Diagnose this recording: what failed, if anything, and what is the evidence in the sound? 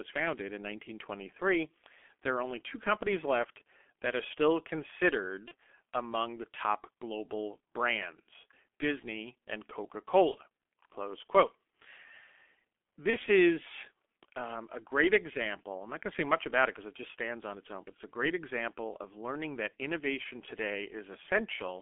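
The whole recording has passed through the G.723.1 codec, at the codec stage. The speech sits in a narrow band from about 250 Hz to 3.4 kHz, with nothing above. At 6.3 kbit/s the damage is heavy. The voice is muffled and hoarse, and consonants smear. The coder works in 30 ms frames and updates its vocal model slowly. Fast transitions are averaged away and the fine detail of the voice is lost.

An electrical switching spike sits at 3.40 s, between "are only two companies" and "that are still". It is a sharp snap or tight cluster of clicks lasting about 2 ms, laid on top of the speech rather than replacing it. That points to the analogue wiring. The likely source is a nearby switch, motor or static discharge arcing briefly and coupling into the audio line.

VoIP packet loss concealed by the speech codec appears three times, at the network stage. The gaps are at 5.48 to 5.52 s, just before "among the top global", at 10.31 to 10.38 s, and at 13.10 to 13.17 s, just before "is um a great". 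Each is one lost 30 ms frame. The decoder fills the hole by extending its last pitch and filter at falling gain. The result is a brief stretched, fading sound that lingers as later frames rebuild.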